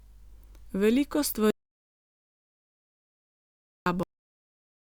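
Audio dropout to silence from 1.51 s to 3.86 s: the speech breaks off mid-flow and about 2.36 s becomes pure digital silence, with no room tone underneath, before resuming abruptly. The cause is likely a lost input while recording continued writing zeros. Whatever was spoken there is gone.

Cut-off end at 4.03 s: the speech stops in the middle of a sound and falls straight to digital silence with no natural decay, because the final stretch of audio was never written out, and the remaining time to the end stays empty.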